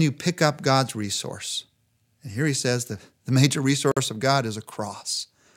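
After "says the the major", at 3.92 s, a 51 ms gap at a join of encoded pieces leaves untrimmed encoder silence. Unlike a dropout, the speech then resumes exactly where it stopped.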